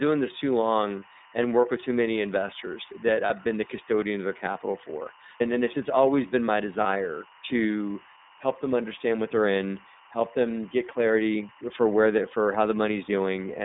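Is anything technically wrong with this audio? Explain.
Yes, there are three faults.

Timecode bleed runs throughout: linear timecode leaking from a neighbouring line puts a chirping warble around 1 and 2 kHz, roughly 30 dB below the speech. Its pattern fits 23.976 fps code. Unlike steady hum or whine, it keeps switching between two pitches an octave apart.

The iLBC codec also affects the whole clip. This narrowband VoIP coder limits the band to about 200 Hz to 3.7 kHz and codes each 30 ms frame on its own, which fits its 13.33 kbps mode. The result is plainly audible roughness and a synthetic edge, not just the muffling of a simple low-pass filter.

Lost iLBC frames occur at 0.99 to 1.06 s, after "this too" and before "and work with too", and at 3.27 to 3.31 s, after "too many investors that" and before "been the custodian of". Each loss is about 30 ms, consistent with one missing frame. 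The decoder fills each gap by repeating the last pitch cycle with noise, so it sounds like a short held, buzzy vowel rather than silence, and the speech recovers at once.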